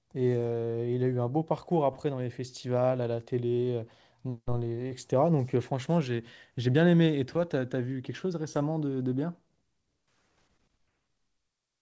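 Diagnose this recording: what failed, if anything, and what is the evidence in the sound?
Short concealed packet loss at 4.88 to 4.92 s, a network-stage fault. About 20 ms of the call never reached the decoder in time, so the receiver extended the preceding sound to bridge the gap and then blended back, leaving a brief smear in audio already band-limited to 8 kHz by the G.722 call codec.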